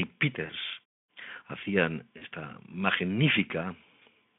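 A speech clip with two brief dropouts from VoIP packet loss concealed by the speech codec, at 0.45 to 0.51 s and 2.17 to 2.25 s. Each gap is about 40 ms of missing audio, which fits two lost 20 ms frames. The Speex decoder bridges each gap by extrapolating from its last pitch and filter state and lowering the gain. This gives a short stretched, fading sound, and the voice sounds weak or distorted for a moment after the audio resumes.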